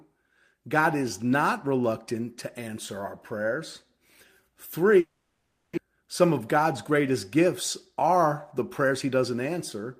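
From 4.99 to 5.79 s the speech smears into a fading buzz, then goes silent for about half a second, likely a long network dropout, and resumes with a chunk missing. Right after, a jitter buffer speed-up kicks in, trimming pitch periods to shed roughly a tenth of a second of backlog. The speech runs about 5% fast from 5.87 to 7.46 s, sounding hurried, then about 3% fast from 7.92 to 8.92 s, both at unchanged pitch.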